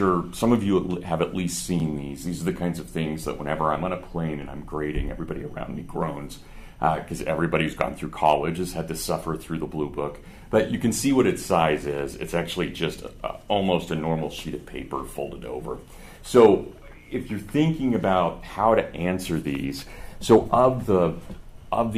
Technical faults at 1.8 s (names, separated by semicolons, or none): repeated buffer